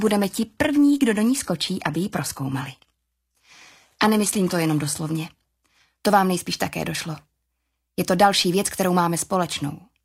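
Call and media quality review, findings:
Adaptive stream starting at a low bitrate, 0.0 to 6.0 s. Dull, smeared top end with synthetic-sounding treble and stronger codec artefacts. Consistent with an HE-AAC rendition around 20 kbit/s. Player picked the low rung for fast startup, then stepped up after measuring throughput. Clean switch at 6.0 s, no gap. Afterwards sounds like AAC-LC near 96 kbit/s, content cut off above 14.9 kHz.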